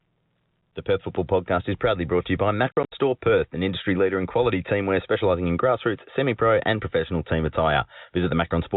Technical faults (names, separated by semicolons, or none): packet loss filled with silence